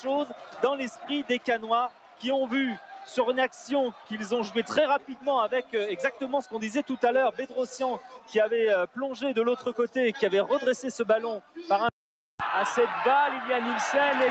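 Across the whole clip the level pumps and thins, with sustained parts sinking by around 10 dB while attacks stay strong. This is a noise suppressor applied to music or sounds: a speech-tuned suppressor treats steady tones and decays as noise and keeps pulling them down.

Sound cut by the noise suppressor is clearest at 0.0–1.47, 1.89–2.23, 2.77–3.15, 3.49–4.1, 4.99–5.25, 6.12–6.53, 7.99–8.32 and 11.4–11.56 s. Held material and tails drop by about 9 to 12 dB and decays are cut short.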